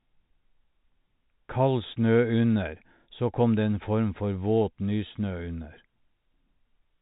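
No technical faults heard.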